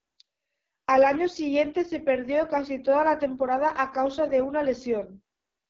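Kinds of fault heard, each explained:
AMR wideband (HD Voice) codec: the speech is rebuilt from a pulse-driven vocal tract model, and it sounds rough and raspy throughout, which fits the lowest 6.6 kbit/s mode. Unlike narrowband AMR, the band extends past 6 kHz, with noise-filled highs and nothing above 7.5 kHz.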